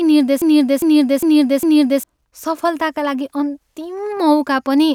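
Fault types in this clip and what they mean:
Broken-record loop: from 0.42 to 2.04 s the same 0.40 s fragment of speech plays four times in a row, each pass identical and butted straight against the next, so the sound stutters mechanically instead of moving forward. The likely cause is a stalled player, encoder or stream that kept resending the last piece it held. Whatever speech belonged in those 1.6 seconds never arrives and is simply missing from the clip.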